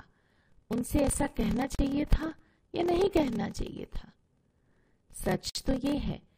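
Right from the start, the whole speech clip carries a block size mismatch (padded). There's a steady buzz at about 38.3 Hz, and everything runs at 0.889 times normal speed while the timbre stays. That ratio fits one stage writing 1024-sample blocks into a stage that reads around 1152, so each block gets a short run of zeros tacked on. Those regular little dropouts are the buzz, and the extra padding is what drags the pace.

On top of that there are two gaps at joins of encoded pieces. The first runs from 1.75 to 1.79 s, about 39.5 ms of silence. The second is longer, from 5.50 to 5.55 s, roughly 56.6 ms. Each one opens in continuous sound with smeared edges, and then the audio picks up exactly where it stopped. That's the leftover encoder start-up delay and last-frame padding from separately encoded pieces being joined without trimming.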